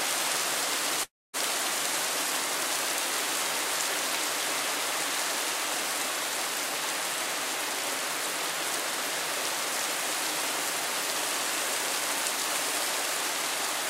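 At about 1.03 s the audio cuts out for roughly a third of a second, until 1.36 s. The last bit of sound smears into a fading buzz, then about 230 ms of near silence. That's likely a long network dropout, with around 300 ms never arriving.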